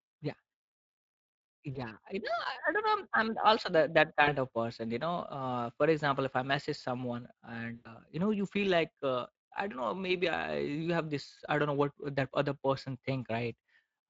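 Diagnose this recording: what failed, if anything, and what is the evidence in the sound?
Two failures, codec and network. The Speex codec runs throughout at roughly 20.6 kbps and its damage is plainly audible: the speech sounds hoarse and noisy because the CELP encoder has too few bits to model the excitation, so the residual comes through as grainy distortion.

VoIP packet loss concealed by the speech codec occurs three times. At 1.73 s one lost frame gives 20 ms of smeared sound. At 4.23 s two frames are lost, about 40 ms, just before "of person". At 7.75 s five frames are lost, about 100 ms, between "if I message someone" and "you know you feel". Each gap is filled by extrapolating the last pitch and filter at falling gain, which produces a buzzy or noisy, fading tail that stays weak briefly after packets resume.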